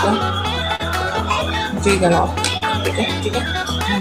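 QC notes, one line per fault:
0.75–0.81 s and 2.57–2.63 s: short concealed packet loss. About 40 ms went missing each time; the receiver extrapolated the preceding sound, leaving a brief smear before resuming.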